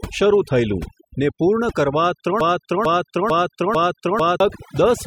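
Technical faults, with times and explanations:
Throughout, overdone noise removal: noise reduction set far too strong pushes single frequency bands down whenever they sit near its noise estimate. The background drops and breaks up into twinkling specks. The damage flickers band by band, unlike a filter's even cut.
2.41 to 4.40 s, broken-record loop: a 0.45 s fragment plays four times back to back, identical each time, and the speech meant for those two seconds is lost. The likely cause is a stalled player or stream resending its last fragment. Exact repeats distinguish it from echo.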